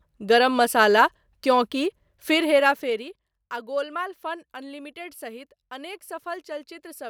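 From 2.31 to 3.32 s, zipper noise: the speech drops about 15 dB in unsmoothed 1 dB steps, roughly fifteen a second, each clicking, unlike smooth fader moves.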